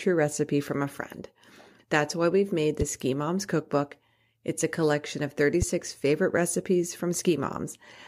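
A loud pop strikes at 2.81–2.84 s, after "why we've made", and again at 5.62–5.65 s, between "a collection of" and "favorite recipes". Each is a single sharp spike, roughly 10 dB above the speech, which continues underneath. The cause is likely a brief voltage pulse from a switch or static. On the waveform each pop is a narrow spike, and on the spectrogram a thin vertical line spanning the full frequency range.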